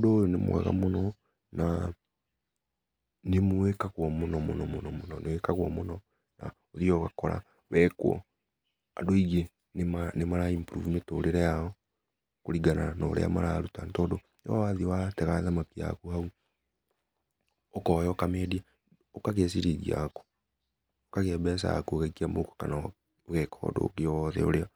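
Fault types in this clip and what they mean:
No faults are audible anywhere in this speech.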